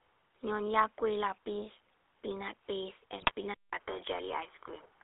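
The whole clip carries the GSM full-rate codec. The band runs only 300 Hz to 3.7 kHz, and the speech sounds buzzy and gravelly, consistent with 13 kbps coding.

From 3.20 to 3.31 s, GSM bit errors corrupt the decoder's parameters. The speech breaks into a brief gargling squawk.

At 3.54 s there is a silence of 188 ms. Then the speech turns duller, with nothing above 3.4 kHz and faint new noise. The level barely changes. This is likely an input switched to a poorer device.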